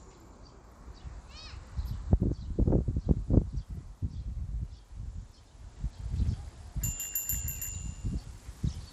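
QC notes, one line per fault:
Throughout, Bluetooth SBC compression: the top end is thin and unsteady, with treble dropping out and flickering back, and a gritty haze sits on everything. That's the likely cause: SBC splits the signal into a handful of wide bands and, starved of bits, gives the quiet upper bands almost nothing while coarsely quantising the rest, so grit and aliasing creep in. The damage is plainly audible and fits a low bitrate around 96 kbps.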